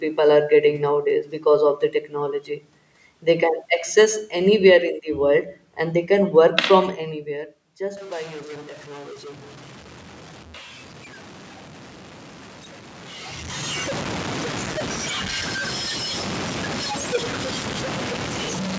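From 7.97 s to the end of the clip, a stuck bit distorts the speech, and pauses fill with noise. The likely cause is one data bit held fixed, offsetting roughly half the sample values.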